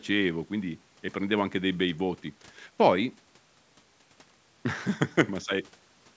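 No technical faults can be heard in this speech, which has been through normal call microphone processing with nothing above 8 kHz.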